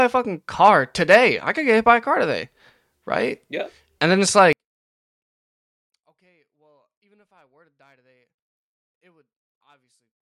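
Speech that, from 4.53 s to the end, collapses to a faint remnant about 41 dB quieter, with the centred voice almost gone. One channel inverted is the likely cause: reversed polarity cancels everything common to both channels when summed to mono.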